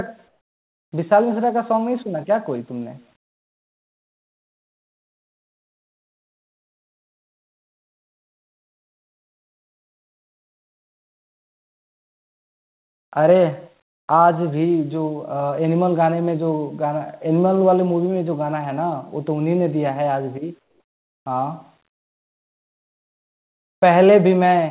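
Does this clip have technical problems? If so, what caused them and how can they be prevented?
Yes. There's echo with no canceller running the whole way through: every phrase comes back roughly a fifth of a second later as a faint, thin copy about 27 dB down. The far end's loudspeaker is feeding its microphone and nothing strips it out. Switching on acoustic echo cancellation at that end, or having them use a headset, would stop it.

From 0.28 to 0.92 s and from 20.6 to 21.26 s, the real background drops out and a smooth, featureless hiss takes its place, about 3 dB and about 5 dB quieter respectively. That's likely comfort noise in place of the background: the sender stops transmitting in pauses and the receiver makes up the filler. Turning off discontinuous transmission on the sender would keep the real room tone.

The narrow band topping out at 4 kHz comes from the call codec, which fits G.711.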